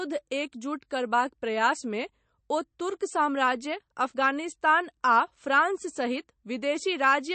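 A speech clip with MP3 compression damage running throughout: nothing survives above about 8.3 kHz, and the artefacts are plainly audible. That's likely a starved MP3 encoder chopping the top end and dropping weak detail, which fits a low bitrate around 35 kbps.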